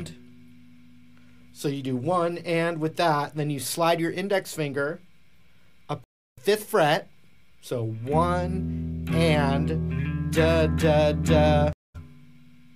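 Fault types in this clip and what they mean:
Stream reconnect: at 6.04 to 6.38 s and 11.73 to 11.96 s the link drops, leaving 325 ms and 215 ms of silence while the player reconnects and restarts its decoder. The first resumes roughly a fifth of a second further on, the second about where it stopped.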